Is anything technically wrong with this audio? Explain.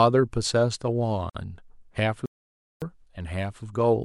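Yes, there are two separate dropouts in this speech clip.

At 1.30 to 1.35 s there is a gap at a join of encoded pieces, a silence of about 50 ms. It fits segments of roughly 4 s that were encoded separately and joined untrimmed, so one piece's padded final frame and the next piece's start-up delay both stayed in. The edges sound smeared by the codec, and the speech resumes exactly where it stopped. Its short, fixed length sets it apart from a stall.

From 2.26 to 2.82 s there is a playback stall, 560 ms of silence in mid-flow, far longer than any codec join gap. Its likely cause is that the player ran out of buffered data or its output thread was blocked, so nothing was sent to the output until it recovered. Its length distinguishes it from the brief codec gap earlier.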